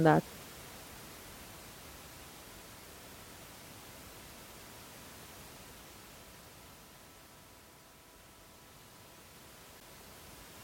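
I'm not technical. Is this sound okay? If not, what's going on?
No. Gap at a join of encoded pieces, 9.80 s: two separately compressed sections were joined without trimming, leaving a 10-millisecond silence before the speech resumes.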